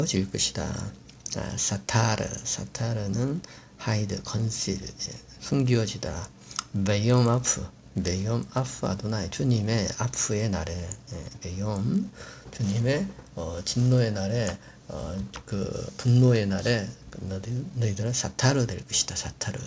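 All the way through, a 50 Hz buzz rides on the sound. It's a resampler restarted on every block, with edge errors that fit 20 ms blocks, likely a 48 kHz to 16 kHz conversion.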